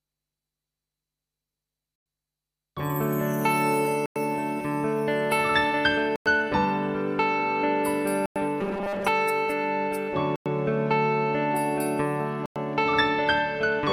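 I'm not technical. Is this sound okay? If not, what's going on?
No. Six times, at 1.96, 4.06, 6.16, 8.26, 10.36 and 12.46 seconds, the sound briefly stops for a tenth of a second. This is a gap between chunks: the audio was delivered in 2-second pieces with silence left at each join. Nothing is missing. It's only interrupted, unlike a dropout, which cuts sound out.

From 8.61 to 9.09 seconds the sound turns into a stiff, metallic buzz at 200 Hz. The likely cause is robotic sound from repeated short buffers: a tiny 5-millisecond slice replays over and over while most of the real audio there is skipped. It differs from the gaps because it buzzes instead of going silent.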